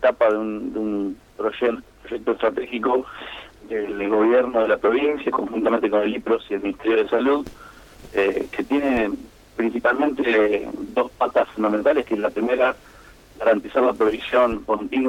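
Nothing stood out as a technical problem on listening to this audio.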